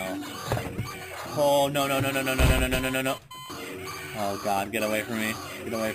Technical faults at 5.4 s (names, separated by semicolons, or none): imaging from sample-and-hold upsampling